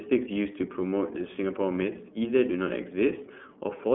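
Throughout the speech, iLBC codec coding confines the sound to a telephone band of roughly 200 Hz to 3.4 kHz, with nothing above 3.6 kHz. Each frame's excitation is coded independently, which fits 30 ms frames at 13.33 kbps, leaving a plainly rough, synthetic grain that plain band-limiting would not add.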